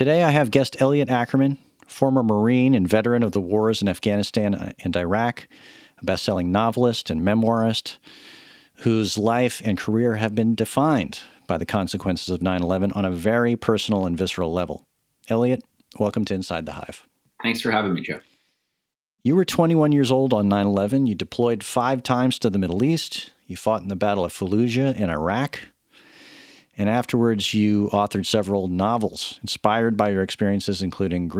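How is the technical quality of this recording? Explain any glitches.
One glitch stands out in this speech recording. Between 3.21 and 3.35 s there is a lost packet rebuilt from error correction. The pattern points to several lost packets. Each following packet carried a low-bitrate backup copy, and the decoder played those copies for about 80 ms, so nothing drops out. Those frames sound rougher and noisier. On a spectrogram they appear as a short, grainier, smeared patch, while the waveform stays continuous with no gap.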